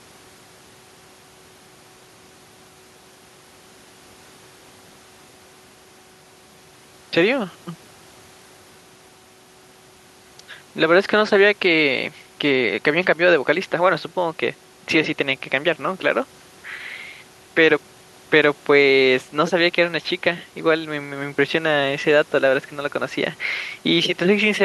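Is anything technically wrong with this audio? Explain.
No, nothing technically wrong stood out on listening to this speech recording.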